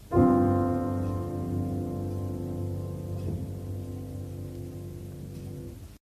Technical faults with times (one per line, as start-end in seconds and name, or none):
none